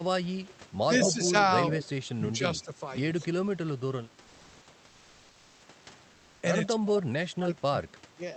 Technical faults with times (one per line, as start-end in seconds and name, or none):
0.87-1.48 speech suppressed in double talk
0.98-1.11 echo leak
2.63-2.80 speech suppressed in double talk
4.21-4.67 comfort noise in place of the background
6.13-6.41 comfort noise in place of the background
6.68-8.36 speech suppressed in double talk